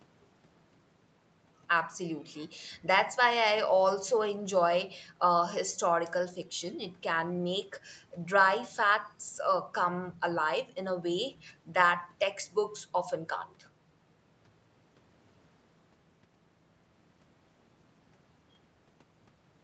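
Speech here carries no technical faults; it has passed through ordinary call microphone processing and a WebRTC call path whose codec leaves nothing above about 8 kHz, a band limit that fits Opus coding at a moderate call bitrate.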